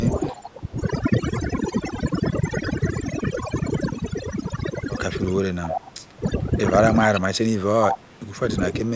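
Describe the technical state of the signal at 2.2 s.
At 2.2 s the speech carries overdone noise removal, present throughout the clip. Bands near the noise estimate are pulled to near silence, leaving a spectrogram of isolated twinkling specks between voice traces. A call microphone path caps everything at 8 kHz.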